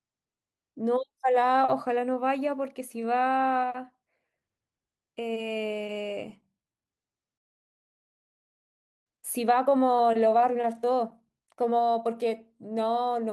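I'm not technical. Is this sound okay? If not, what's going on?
No. The recording is speech, and it has timing problems from start to finish plus one clear break in the middle.

The underlying issue is clock drift between sender and receiver. The device that sent the audio kept time about two percent slower than the device playing it back, so the player kept running slightly short of sound. Unlike a single glitch, this is a steady mismatch that never goes away, so its effects are spread over the whole clip rather than landing at one moment.

What you hear from that drift is repeated timing corrections, from 0.12 s right to the end. To keep up with the slower source, the player keeps stretching the sound by repeating tiny slivers, so it runs at about 98% of normal speed. Each patch is very small and unevenly spaced, so instead of a clean dropout you get faint stumbles and a slightly unsteady pace.

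Then comes a playback stall, from 7.38 s to 9.07 s: the speech simply stops for about 1.7 seconds and then resumes. This is a real gap of silence, not a hiccup, and the likely cause is that the player ran completely out of incoming sound, which fits a slow sender draining its reserve.

Right after, from 9.07 s to 12.07 s, there's a time-compressed catch-up. The player trims small pieces and blends the seams to make up the lost time, so the speech plays about 1.1 times faster. The pitch stays normal, which is what separates it from sped-up tape.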